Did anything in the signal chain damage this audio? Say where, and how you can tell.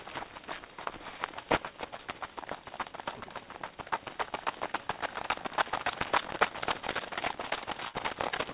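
Yes. At the driver or buffer stage there is a block size mismatch (truncated). A steady buzz at 188 Hz runs through the whole clip. The sound plays about 1.88 times too fast, yet its pitch stays near normal. One stage drops each block's tail, which fits a 256-sample read.

On the network side there is short concealed packet loss at 0.84, 1.97 and 6.48 s. Each is a brief smear or wobble. About 20 ms never arrived. The receiver covered it by continuing the previous sound, then blended back into the real audio.

A burst of packet loss hits from 7.88 to 7.96 s. About 60 ms went missing. The concealment held the last sound and faded it as a dying buzz or hiss. The audio then resumes further on, with that stretch gone. The call codec's 4 kHz ceiling holds throughout.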